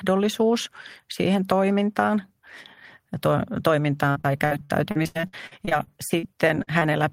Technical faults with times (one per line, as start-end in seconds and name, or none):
4.11-6.25 repeated packet loss (robotic sound)
6.63-6.83 short concealed packet loss